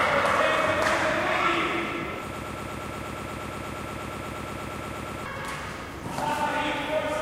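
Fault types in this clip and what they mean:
Broken-record loop: From 2.34 s to 5.26 s, a fragment about 0.12 s long repeats 25 times in a row, with no gap between copies. Every copy is identical, so the sound stutters at a steady rate of roughly eight per second. The cause is likely a stalled player, encoder or stream that kept resending the last piece it held. The sound that belonged in those three seconds never plays.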